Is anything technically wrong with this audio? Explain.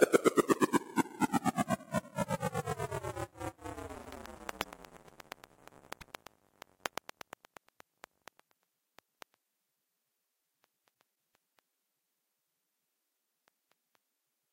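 Yes, there are two kinds of fault.

Loud pop, 0.53 to 0.56 s: a single sharp pop peaking about 10 dB above the surrounding sound, which continues beneath it. A voltage spike, likely from a switch, plug or static discharge, was added to the signal, and the downstream circuitry shaped it into a brief thump.

Frames out of order at 3.94 to 4.17 s, 5.91 to 6.12 s and 11.01 to 11.12 s: in each, two adjacent blocks of about 104.5 ms, which fits runs of four frames, were decoded in swapped order. Each stretch plays as a garbled flutter, and no time is lost.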